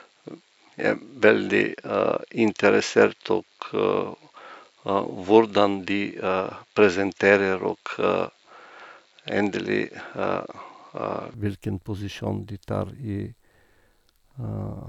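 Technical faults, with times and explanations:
0.0–11.34 s, input switched to a poorer device: the speech likely came through a lesser microphone, so nothing reaches above 7.6 kHz, the level differs by about 5 dB and a faint noise floor rides underneath, until the sound abruptly opens out at 11.34 s with no gap.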